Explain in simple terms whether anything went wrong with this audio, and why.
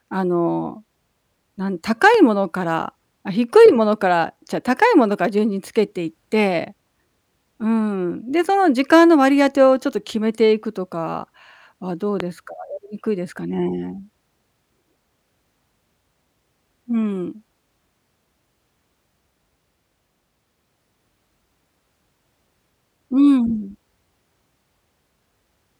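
Two loud pops cut in, at 2.14 s and 12.2 s. Each is a sudden electrical jolt, likely from a plug, switch or static, while the speech carries on underneath.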